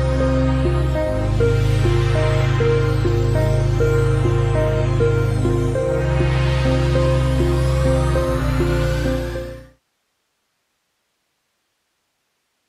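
Nothing in this audio stood out as a technical problem on listening.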